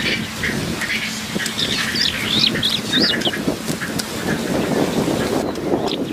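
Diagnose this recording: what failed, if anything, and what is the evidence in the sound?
Chunks out of order, at the buffering stage: between 3.11 and 3.30 s and between 4.97 and 5.16 s, the sound jumbles. The jumbled stretches point to 46 ms chunks, each played three chunks late. Unlike a dropout, nothing is missing. The material is only reordered, leaving hard joins.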